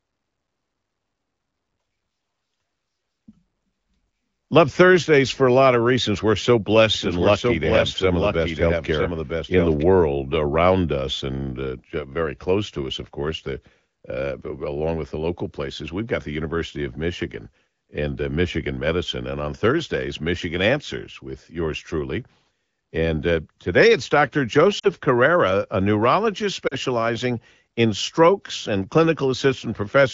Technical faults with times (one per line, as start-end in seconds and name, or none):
6.95-9.83 doubled audio track
24.79-24.88 lost AMR speech frames
26.67-26.77 lost AMR speech frames